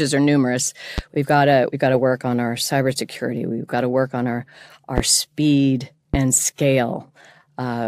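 Three loud pops sit on the speech: at 0.98 to 1.01 s after "are numerous", at 4.98 to 5.01 s after "to work on our", and at 6.14 to 6.17 s. Each is a single sharp thump, about 15 to 20 dB above the speech, likely from a voltage spike such as static or a switch. Unlike a dropout, the speech carries on underneath without a gap.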